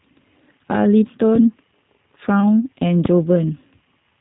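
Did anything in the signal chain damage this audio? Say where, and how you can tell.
Yes. Throughout the speech there is a rough, slightly synthetic quality and a dull top with nothing above about 3.8 kHz. That points to the codec stage, specifically G.729, in its G.729A form at 8 kbit/s. The codec does not send the waveform itself. It sends a vocal-tract filter, a pitch predictor and a few pulses per 10 ms frame. The decoder's rebuilt excitation is what sounds coarse, and the narrow band cuts off the highs.

A single loud pop sits on top of the speech from about 3.05 to 3.07 s, roughly 15 dB above the surrounding level. It is a sharp click-thump lasting a couple of hundredths of a second, and the speech continues underneath without a break. That points to the analogue wiring rather than to lost data. The likely cause is a sudden voltage step, from a plug, a switch or a static discharge, that the following circuitry shaped into a brief pulse.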